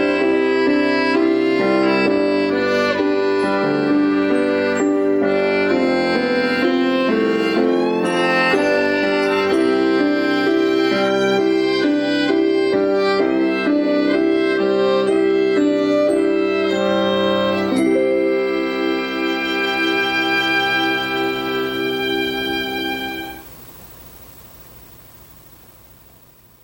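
From 2.36 s to 6.69 s there's timecode bleed: 25-frame linear timecode has crept in from a neighbouring line. Its square wave flips between pitches around 1 and 2 kHz, so you get a faint chirping warble, roughly 35 dB under the sound.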